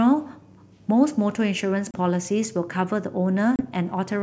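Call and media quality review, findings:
Packet loss on the ADPCM call, 1.91–1.96 s: hard-edged ~30 ms silence, a few packets gone. Speech comes back slightly distorted. Decoder predictor and step size drifted from the sender's, then resync within tens of ms.

Same again, 3.56–3.66 s: ~30 ms dropout, same roughness before it settles. Points at the jitter buffer or network, not the G.722 encoder itself, which stays clean up to 7 kHz.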